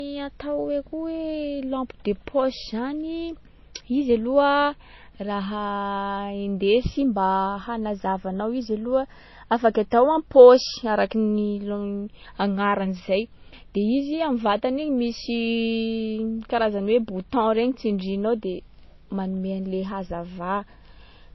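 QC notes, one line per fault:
Throughout, low-bitrate audio saved at a high bitrate: the speech has nothing above 5.8 kHz, a hard ceiling that fits an earlier pass through MP3 at about 24 kbit/s, likely since re-encoded as 256 kbit/s MP3. The higher bitrate cannot restore the missing band or clean up the smeared, swirly first-pass artefacts, so it sounds no better than a genuinely low-bitrate file.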